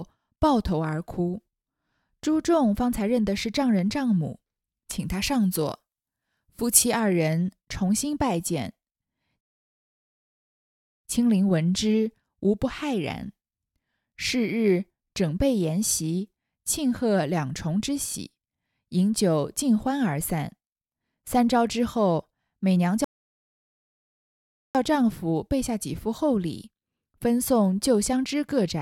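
Speech recording with two faults. From 5.0 to 7.0 s, pre-emphasis was left on: a CD-style 50/15 µs treble boost, never undone, lifts 10 kHz about 8 dB above 1 kHz, so the sound turns thin and sibilant, and a spectrogram shows that stretch's upper band visibly brighter. Two rebuffering stalls, at 9.41 to 11.04 s and 23.04 to 24.75 s, drop the audio to silence for 1.63 s and 1.70 s before it resumes exactly where it halted. The waveform shows flat gaps there and no missing material.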